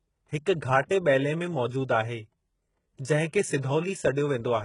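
Throughout, treble appears rebuilt from copied lower bands, likely HE-AAC compression near 12 kbps, leaving sibilants gritty and metallic, with nothing above 11.1 kHz. At 0.89 s, pre-echo: quantisation noise spread across a transform block leaks 12 ms ahead of a sharp attack, adding brief hiss and smearing the onset.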